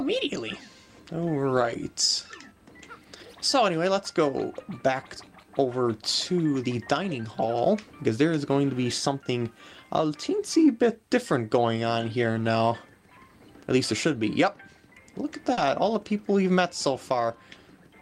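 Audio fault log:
15.53–15.59 s, short concealed packet loss: about 40 ms of audio arrived too late for the decoder, so the receiver filled the gap by extending the preceding sound, then cross-faded back into the real signal. This leaves a brief smeared wobble where the continuity breaks.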